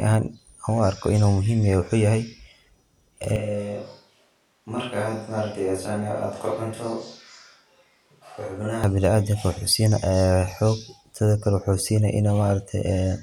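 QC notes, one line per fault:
3.36 to 8.84 s, switch to a distant microphone: the speech abruptly turns roomy and hollow, thinner in the bass, and about 5 dB quieter, with a room noise floor around 40 dB below the speech, then snaps back just as suddenly. The close microphone's feed likely dropped out, leaving a far pickup that catches more reflections and less direct low end. On a spectrogram, low frequencies thin out and reverb tails smear between syllables, while the waveform shows a lower envelope with hard edges at both transitions.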